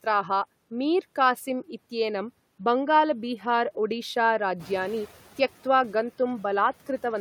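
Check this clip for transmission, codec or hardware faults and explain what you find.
One fault turns up in this speech: a noise suppressor catching up. From 4.59 to 5.06 s, background noise briefly comes through louder before sinking about 6 dB, because the suppressor's estimate needed 470 ms to follow the room noise's sudden rise of about 13 dB around 4.5 s.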